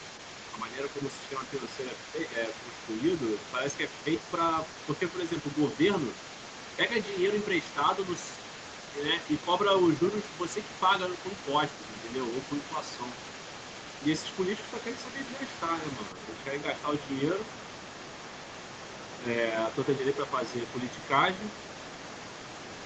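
An echo canceller likely failed to remove the loudspeaker signal, so the other side's voice leaking through sits faintly under the talker throughout, around 15 dB lower. Between 0.53 and 3.8 s, the canceller likely mistook double talk for echo and turned the talker down too. This speech suppressed in double talk makes the voice dip by a few decibels in patches totalling about a second.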